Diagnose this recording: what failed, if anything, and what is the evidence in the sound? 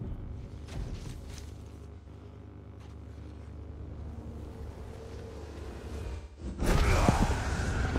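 Smeared, phasey patch at 1.97–2.07 s, then broken, dipping stretches across 6.07–6.68 s: AAC frame loss with concealment, the decoder patching lost frames from earlier spectrum.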